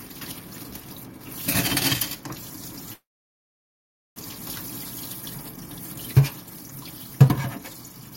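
At 2.93 s the audio stalls in a call audio freeze lasting until 4.18 s. The last sound is stretched into a brief fading buzz or hiss, then about 1.14 s of silence follows. The likely cause is packets delayed in transit, draining the jitter buffer so the receiver had nothing new to play. At 4.18 s the sound resumes exactly where it stopped. Nothing is lost, but about 1.23 s of gap has been inserted.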